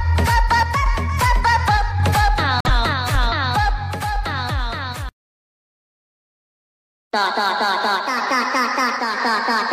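A corrupt frame muted gap cuts the audio from 2.60 to 2.74 s. The sound drops abruptly to silence for about 0.13 s, which fits several rejected compressed frames. Timing afterwards stays intact.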